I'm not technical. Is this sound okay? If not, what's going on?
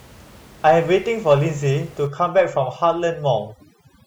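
No. From about 2.07 s to the end there's overdone noise removal: a cleanup tool set too hard strips out quiet sound, leaving twinkly near-silence behind it.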